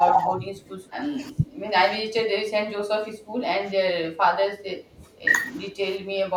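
Speech suppressed in double talk at 0.00–0.65, 1.17–1.46 and 2.16–2.24 s: the voice dips by roughly 15 dB and thins in short pieces, likely because the echo canceller could not separate the near talker from the loudspeaker echo during simultaneous far-end talk and attenuated both. Background gated by the echo canceller at 2.52–2.70 s: with the loudspeaker active, the canceller clamped the microphone, so the room sound sinks by about 13 dB and then returns. Double-talk suppression recurs at 2.98–3.17 s, cutting deeper, roughly 25 dB. The background gating returns at 3.45–4.11 s, about 12 dB down. Double-talk suppression comes back at 4.39–5.26 s, roughly 15 dB, in broken stretches. The final background gating runs from 5.69 s to the end, about 13 dB down.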